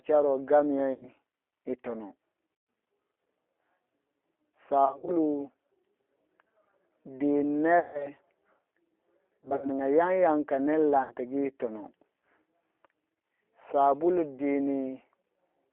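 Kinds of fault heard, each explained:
G.729 codec: low-rate speech coding at 8 kbit/s over a 300 to 3400 Hz line band, sounding rough and synthetic; the spectrogram is empty above 3.4 kHz.
VoIP packet loss concealed by the speech codec: seven dropouts, 10 to 150 ms, where the decoder extends the last sound into a fading buzzy tone or coloured noise, seen as smeared, decaying waveform stretches.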